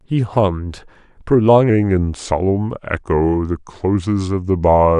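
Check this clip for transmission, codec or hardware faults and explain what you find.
One fault is present in this speech. From 1.70 s to the end, the section is at the wrong speed: it plays at 0.885 times normal, likely from being clocked at the wrong rate. The voice drops about two semitones and drags. Pitch and tempo fall together, unlike a pitch-shift fault, which keeps the timing intact.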